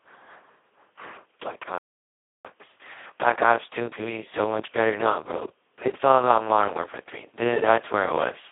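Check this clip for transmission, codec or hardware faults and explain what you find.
Two faults are present: the whole speech clip is heavily degraded by the Speex codec, and a playback stall interrupts it once.

Speex codec damage runs from start to end. The speech sounds hoarse, buzzy and close to robotic, which fits Speex at its lowest quality setting, around 2 kbps. At that rate the CELP coder has almost no bits to describe the excitation signal, so it falls back to something near a vocoder and the natural texture of the voice is lost. The audio sits in a telephone-like band of about 250 Hz to 3.4 kHz. On a spectrogram, energy stops cleanly near 3.4 kHz with nothing above, and the harmonics below look smeared and noisy instead of crisp.

A playback stall runs from 1.78 s to 2.45 s, a gap of about 0.66 s. The sound cuts off in mid-flow, stays silent, then resumes. The likely cause is that the player ran dry of buffered data or its audio thread was blocked, so nothing was sent to the output until it recovered. 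On a waveform this shows as an abrupt flat line. On a spectrogram it is a fully blank vertical band across all frequencies.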